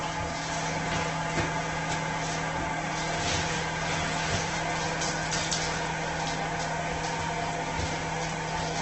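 Throughout the recording, the sound is grainy, rough and noisy, and nothing is present above 8.3 kHz. This is likely Opus compression in its music mode at a very low bitrate near 12 kbps. On a spectrogram, the energy stops flat at 8.3 kHz, with mottled noise filling the bands below.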